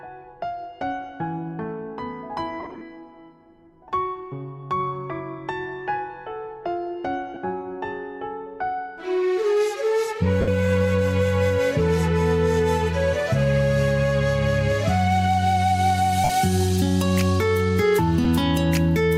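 Brief noisy smears replace the sound at 2.60 to 2.81 s, 7.34 to 7.37 s, 10.41 to 10.48 s, 16.24 to 16.30 s and 18.24 s. These are lost LE Audio frames. The first is a scattered cluster with runs of up to around 30 ms. The gap sizes fit 7.5 ms frames. The LC3 decoder filled each gap by repeating the last spectrum with randomised signs, which turns tonal content into hiss-like blur.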